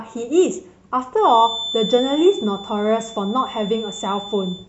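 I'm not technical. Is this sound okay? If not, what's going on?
No. From 1.16 s to the end, a thin steady whistle near 3.5 kHz sits quietly under the speech: a feedback whistle, likely from the loudspeaker's sound leaking back into the microphone.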